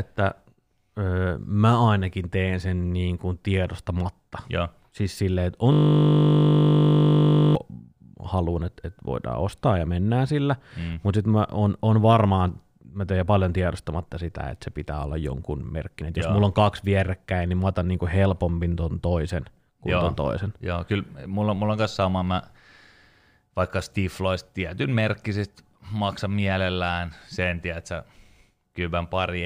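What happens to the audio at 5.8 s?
At 5.8 s the speech is caught in a system hang loop, running from 5.72 to 7.55 s. The machine or its driver stalled while the sound hardware kept replaying the same 20 ms slice of its ring buffer, about ninety times over. At a 50 Hz loop rate this comes across as a steady, flat buzz. The waveform shows one identical 20 ms cycle tiled end to end, and the spectrogram shows evenly spaced horizontal lines every 50 Hz.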